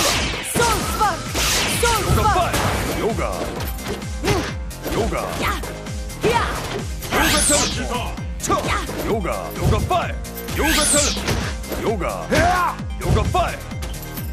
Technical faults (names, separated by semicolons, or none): none